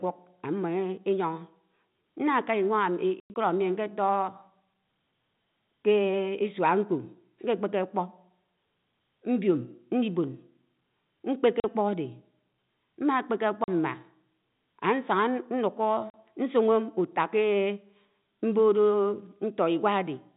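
Speech over a G.711 telephone path, band-limited to 4 kHz, with packet loss filled with silence. From 3.2 to 3.36 s, about 120 ms of audio drops out across a 160 ms span, the longest single gap 100 ms. Shorter 40 ms holes fall at 11.6, 13.64 and 16.1 s. All gaps are multiples of 20 ms, which fits 20 ms packets going missing and the receiver playing silence in their place.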